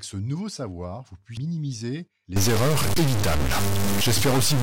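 Damaged data in a compressed stream hits this speech recording at 1.37 s, right after "ce nouveau savoir vous": the decoder misreads a corrupted frame, loses sync and hunts for the next frame header, producing a brief glitch. A stuck bit takes over from 2.36 s to the end, adding distortion to the speech and filling the pauses with noise. The likely cause is one data bit held fixed at 0 or 1, shifting roughly half the sample values by that bit's weight.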